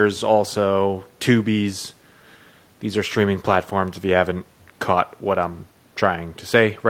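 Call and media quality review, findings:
Nothing stood out on listening to this speech recording.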